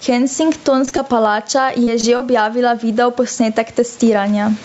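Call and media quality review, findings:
Gain pumping, throughout. Loud and soft parts pulled closer in level, level swinging around 15 dB; dynamics squashed. Likely cause: input gain set far too high, with a fast limiter or compressor clamping down on every peak.

Short concealed packet loss at 0.85–0.89, 0.89–0.93, 0.97–1.00, 1.84–1.89, 2.01–2.05 and 2.17–2.22 s. Brief smears and wobbles over 20–40 ms gaps, consistent with one or two lost 20 ms frames. The jitter buffer or decoder extrapolated the preceding sound, then crossfaded back.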